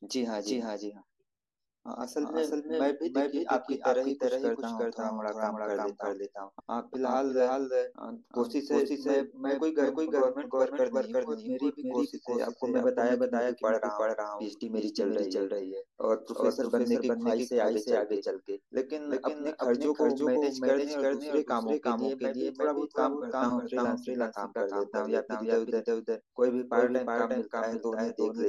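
A doubled audio track runs through the whole of this speech clip: a second full-band copy trails the original by roughly 0.4 s at about equal loudness, with no decay or room colour, most likely from a second, slower capture path mixed in alongside the first.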